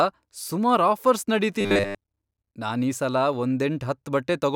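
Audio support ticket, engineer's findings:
Robotic sound from repeated short buffers, 1.61 to 1.98 s. Rigid metallic buzz at 100 Hz, 10 ms loop, most audio replaced by repeats. Likely playback buffer underrun, concealment looping last buffer while real audio skipped.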